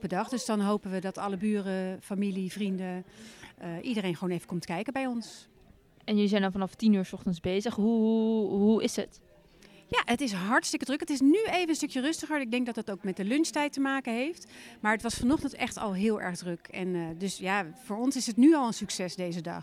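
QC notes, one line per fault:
No technical faults were found anywhere in the audio.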